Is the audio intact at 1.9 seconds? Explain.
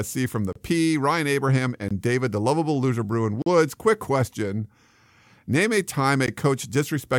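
No. From 1.88 to 1.91 s, the speech drops into a block of digital silence lasting about 21 ms, which fits a 1024-sample buffer that wasn't filled in time. The signal falls to silence and returns with no fade, so the ear hears a short hole. On a waveform it shows as a flat line with sheer edges. On a spectrogram it appears as an empty vertical gap bordered by thin broadband streaks.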